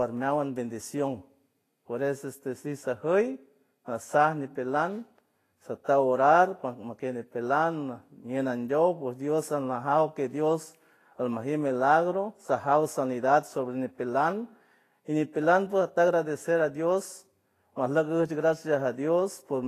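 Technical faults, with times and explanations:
Throughout: low-bitrate audio saved at a high bitrate. Nothing is heard above 14.2 kHz, likely from a low-bitrate encode re-saved as MP3. Re-encoding cannot restore it.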